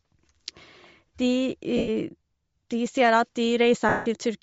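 A speech recording that has most likely passed through Bluetooth LC3 compression, the LE Audio transform codec. The data rate appears to be low, with the sound pointing to about 32 kbps in 10 ms frames. At that rate much of the upper spectrum is discarded and filled with synthetic noise, so the voice carries a plainly audible breathy, grainy edge from start to finish. Lost LE Audio frames then break the stream twice, from 1.77 to 1.89 s (about 110 ms) and from 3.89 to 4.06 s (about 170 ms). During each gap the decoder repeats the last good spectrum with randomised signs. The speech therefore smears into a rough, noisy blur, and it fades away as each gap goes on before the audio returns.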